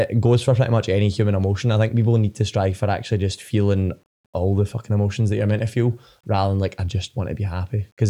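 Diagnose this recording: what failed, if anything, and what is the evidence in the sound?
Grainy, signal-following distortion runs through the whole speech clip, roughening quiet passages and dropping out or sputtering in the softest decays, with error sitting roughly 45 dB below the signal. This is low bit depth without dither, likely from a sample-format conversion that rounded to about 9 bits.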